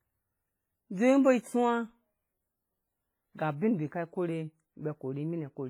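Throughout the speech, heavy transform-codec damage is audible, likely WMA compression at a low bitrate near 24 kbps: ringing, washy smearing and hiss that swells with the signal. A spectrogram shows patchy, blocky gaps where weak components were zeroed, smeared transients, and nothing above 21.4 kHz.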